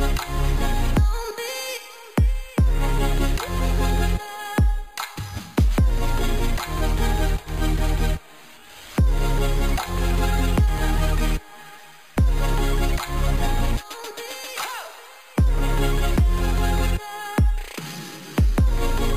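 Imaging from sample-and-hold upsampling runs throughout: each sample was simply repeated, leaving mirrored images from about 5.5 kHz to 11 kHz, about 22 dB down, heard as metallic fizz.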